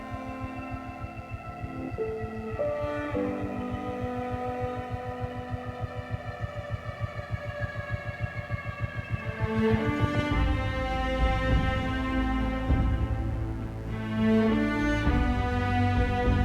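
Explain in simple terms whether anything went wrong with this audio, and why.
A mains buzz runs through the whole clip, start to finish. Electrical noise from the power supply, at 60 Hz, leaked into the recording, likely through a dimmer, a rectifier or a missing shield. It sits quietly under the sound as a constant, raspy hum.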